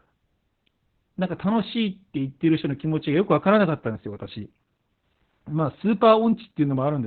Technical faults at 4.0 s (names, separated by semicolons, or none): Opus voice compression